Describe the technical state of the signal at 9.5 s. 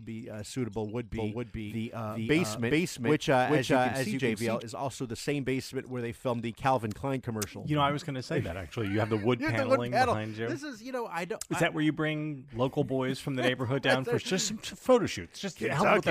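At 9.5 s the signal is intact, with no dropout, distortion, noise burst or other fault audible at that point.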